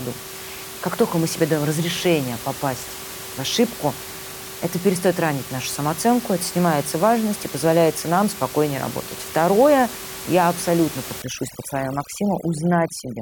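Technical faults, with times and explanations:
11.22–13.21 s, overdone noise removal: right after "я абсолютно" the background drops and breaks up into little twinkling specks all the way to the end. The noise reduction is pushing individual frequency bands way down whenever they sit near its noise estimate, so the quieter bits of the voice get stripped out along with the room noise, which up to that point sits about 13 dB under the speech.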